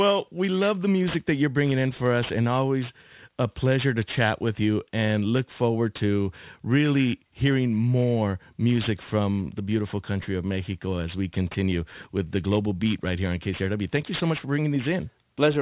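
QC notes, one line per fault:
Throughout, aliasing: speech energy above 4 kHz folds back down below it, so sibilants turn gritty and metallic, which fits a drop to an 8 kHz rate without filtering. Spectrogram shows mirrored high-band traces about 20 dB under the speech, running hard to 4 kHz.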